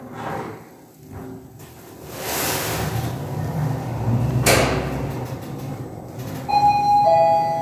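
No technical faults can be heard in this audio at any point.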